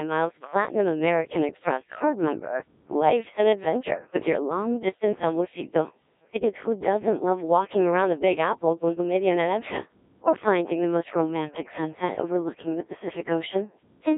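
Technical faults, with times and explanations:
Throughout, Codec 2 vocoder: the speech has been rebuilt from a handful of parameters, pitch, voicing, energy and a coarse spectral envelope, rather than carried as a waveform. The decoder resynthesises it from sine waves, so the voice comes out robotic and buzzy, with heavy smearing that fits a very low rate of about 1.3 kbit/s. The band runs from roughly 250 Hz to 3.7 kHz, with nothing above 3.8 kHz.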